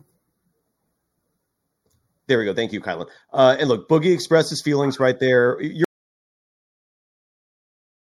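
From the start, the speech has channel delay (comb filtering): one channel lags by a fraction of a millisecond, so the mono sum has its first notch around 3 kHz. The result is a fixed hollow dullness, unlike sweeping phaser movement. At 5.85 s an audio dropout to silence begins and runs to the end. It is silence with no room tone, likely from lost input, rather than a fade or a gate.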